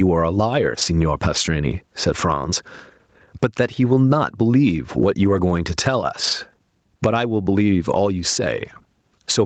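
Right from the start there's gain pumping, with a swing of something like 15 dB. That's likely the input gain set far too high and a fast limiter clamping down, leaving everything squashed. Then come three stretches of lost packets rebuilt from error correction, at 0.69–0.83 s, 5.25–5.51 s and 6.23–6.33 s. They last about 80, 140 and 60 ms. There are no dropouts, but those stretches turn rougher and noisier, because the decoder is playing low-bitrate backup copies of the missing audio.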